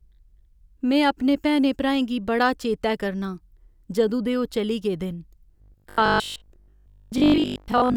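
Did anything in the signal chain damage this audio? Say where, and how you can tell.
Yes. From 5.58 s to the end at 7.96 s the speech becomes robotic, as if built from repeated short buffers: a rigid, metallic buzz at 50 Hz that roughly tracks the syllables. That pitch implies a 20 ms repeat. The likely cause is a buffer underrun at the driver or buffer stage. Audio arrived too seldom, so the last 20 ms block was replayed to fill the gaps, and roughly 70% of the real signal there was skipped.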